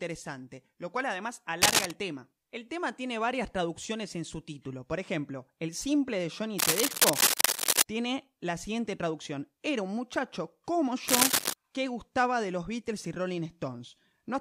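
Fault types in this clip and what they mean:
Cable scratch noise: three bursts of dense, ragged crackle sit over the speech at 1.6 to 1.9 s, 6.6 to 7.8 s and 11.1 to 11.5 s, at roughly 5 dB above the signal. It sounds like scratchy rustling, likely from a worn cable or connector being moved.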